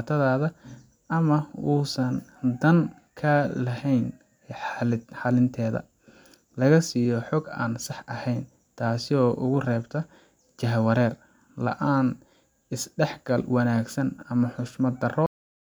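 At 15.26 s the speech stops abruptly in a cut-off end: the final half second of buffers never reached the output, so the sound is severed mid-syllable. The waveform drops straight to a flat line, and the spectrogram shows energy ending on a hard vertical edge with no decay.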